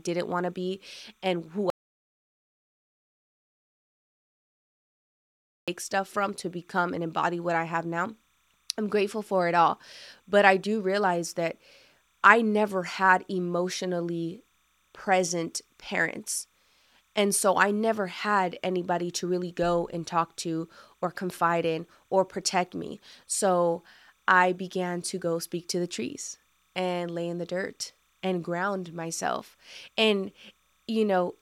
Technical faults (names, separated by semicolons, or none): timecode bleed; audio dropout to silence